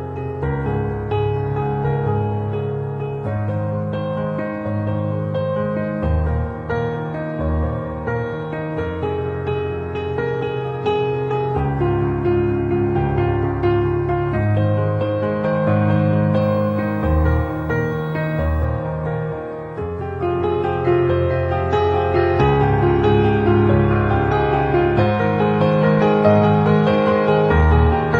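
From 16.42 to 18.65 s a video or display buzz sits under the sound, roughly 40 dB below it. Interference from a screen or video cable is leaking into the audio path, giving a 50 Hz field-rate buzz with gritty hash above it and a faint whine at 15.6 kHz, the line rate. On a spectrogram this shows as a bright 50 Hz band with harmonic stacks, a thin line near 15.6 kHz, and both ending abruptly at 18.65 s.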